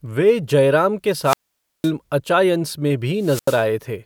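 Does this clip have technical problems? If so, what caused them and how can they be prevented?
Yes. Wireless microphone squelch dropout occurs at 1.22–1.92 s, between "जयराम के" and "अचायंस में", and again at 3.17–3.66 s, after "अचायंस में". Each time the FM radio signal fades and hiss rises. The receiver's squelch then mutes the output, for about 510 ms the first time and 85 ms the second, before the speech returns. Keeping a clear line of sight and a short distance to a diversity receiver, with fresh transmitter batteries, prevents these dropouts.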